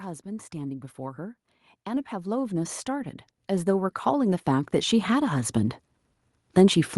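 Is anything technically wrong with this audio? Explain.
Yes. From 0.05 s to 5.56 s there is automatic gain rising. The gain control judged the input too quiet and kept turning it up, about 19 dB over five and a half seconds. Because it acts on the whole signal, the speech and the background noise swell together. On a waveform the envelope widens steadily across that span. On a spectrogram the noise floor between phrases brightens along with the speech. The audio also passed through a call codec, and its band limit near 12 kHz shows as an empty region above that line.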